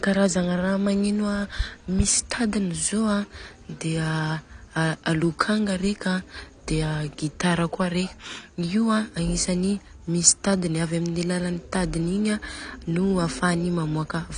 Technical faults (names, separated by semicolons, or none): AAC compression